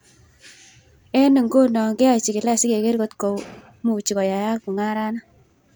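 From 1.90 s to the end there's a time-stretched section: the pace suddenly jumps to about 1.42 times normal with the pitch unchanged, likely from software dropping short chunks, so it sounds rushed.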